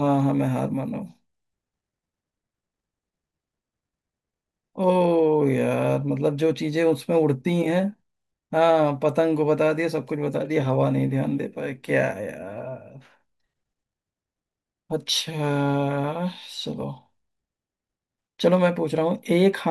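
The speech recording shows no technical faults anywhere in the signal.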